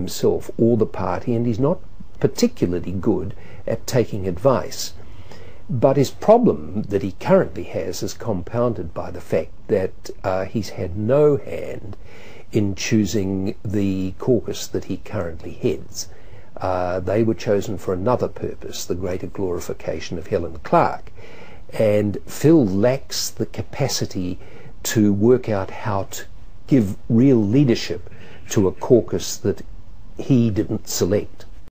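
No audible technical faults.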